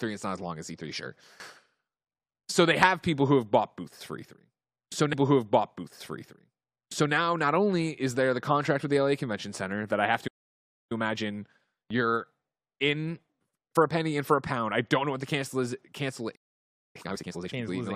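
A speech clip in which the player queued the same stream segment twice, so from 5.12 to 7.12 s about 2.0 s of programme plays a second time. A small blip marks the jump back, and the repeated stretch leads into "not only is there". Someone listening hears the speaker go back and say that passage again, so the clip runs about two seconds longer than it should. The clip also has two playback stalls, each likely caused by the player running short of buffered data or having its output thread held up. Just after "that I have", the sound cuts out from 10.27 to 10.92 s, a gap of about 0.63 s in mid-sentence. It falls silent again from 16.35 to 16.96 s, this time for about 0.59 s. After each stall the player works off its backlog with time-compressed catch-up. It drops small slices of audio and cross-fades across the joins, so the pitch stays where it was while the pace rises. From 10.92 to 13.92 s the speech runs at 1.15 times normal speed, hurried, up to "and for a pound". 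From 16.96 to 17.54 s it runs at double speed.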